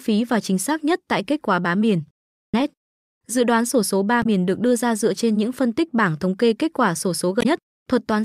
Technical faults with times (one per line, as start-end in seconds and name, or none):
4.19-4.26 damaged data in a compressed stream
7.38-7.46 damaged data in a compressed stream